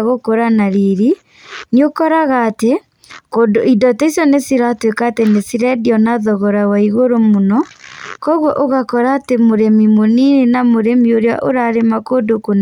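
A bit error spike lands at 5.27 s in this speech clip. A single sample had one bit flip, likely somewhere in memory or on a digital link, so its value leapt by a power of two and snapped straight back on the next sample. That one-sample excursion peaks at about -10 dBFS. It is heard as a single sharp tick, bright and broadband, with no relation to the speech around it.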